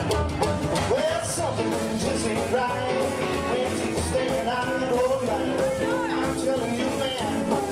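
No technical faults are audible.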